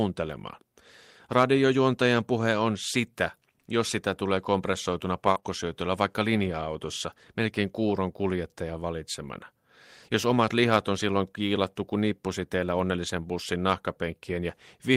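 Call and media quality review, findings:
Short concealed packet loss, 5.31–5.38 s and 5.40–5.44 s, right after "jos sitä tulee kompressoituna". About 40 ms then 20 ms of audio missing; the receiver extrapolated the preceding sound and crossfaded back. Heard as a brief smear or wobble in the speech.

Lost packet rebuilt from error correction, 5.36–5.38 s and 5.44–5.46 s, same spot. One 20 ms packet each time, recovered from Opus in-band FEC carried in the next packet. No gap, but those frames come from a low-bitrate copy and sound rougher and noisier.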